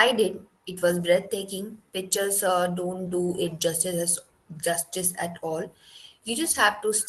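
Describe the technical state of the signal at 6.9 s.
Repeated timing corrections are under way at 6.9 s, part of a run from 0.14 s to 7.05 s that ends just after this moment. The receiver keeps repeating short slices of the speech to fill gaps, so the audio plays at an effective 97% speed. Across the run the repeats add up to roughly a fifth of a second of extra material. Each one is tiny, heard as a faint hiccup or a slightly unsteady, dragging tempo rather than a clear glitch.

The cause is clock drift between sender and receiver, present throughout the clip. The sender's clock runs about 3% slow, so the jitter buffer keeps draining and must be topped up with repeated pieces at uneven intervals. Around 6.9 s this shows as the same slight irregular stretching heard all through the speech, with the call codec's coding noise and a high-frequency ceiling near 12 kHz underneath it.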